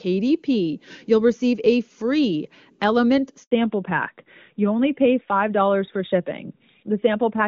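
At 3.43 s the speech cuts out for 80 ms, ending at 3.51 s. This is a handover gap: the call was passed between networks and no speech frames arrived during the switch, so the voice decays quickly into silence and that fragment is lost.

From 3.51 s to the end there is a fallback to narrowband. Before the gap, the wideband HD Voice sound points to AMR-WB at a high rate such as 23.85 kbit/s. Afterwards nothing remains above 4 kHz, which fits AMR-NB at 12.2 kbit/s, and the voice becomes duller and rougher.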